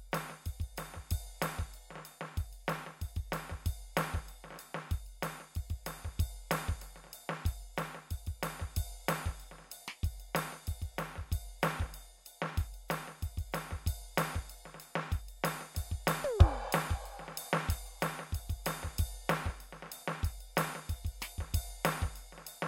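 No technical faults can be heard in this music recording.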